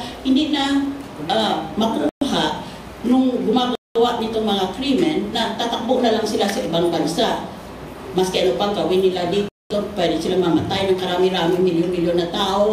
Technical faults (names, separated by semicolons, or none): Bluetooth stall